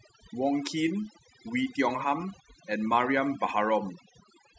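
Speech with overdone noise removal running the whole way through: the denoiser was set too hard, gating out frequency bands sitting near its noise estimate, so the background drops and breaks up into twinkly specks, and the voice's quieter detail goes too.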